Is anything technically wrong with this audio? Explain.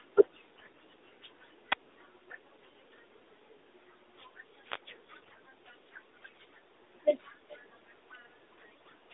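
Yes, there are two kinds of fault in this speech.

AMR bit errors strike at 0.58 to 0.79 s and again at 5.22 to 5.39 s. On a weak radio link, the less protected bits of the AMR frames arrived flipped, at roughly 7 percent and then about 10 percent, while the check on the essential bits still passed. The decoder therefore placed its excitation pulses wrongly and used wrong pitch, gain and spectral values. The voice keeps its rough pitch and level but turns hoarse, scratchy and gargly for those moments.

An echo leak appears briefly at 7.49 to 7.57 s. A faint copy of the voice returns about 414 ms late, roughly 30 dB below the speech, as a short scrap. The likely cause is a far end playing the call on a loudspeaker, where the echo canceller left part of the microphone pickup in place and sent it back. The whole clip carries the narrow 300 to 3700 Hz band of 12.2 kbps AMR-NB.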